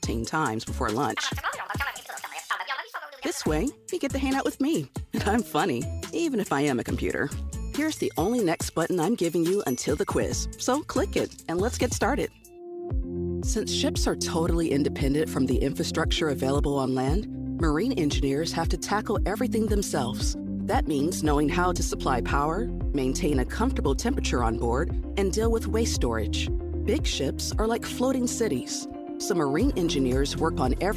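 No technical faults are audible.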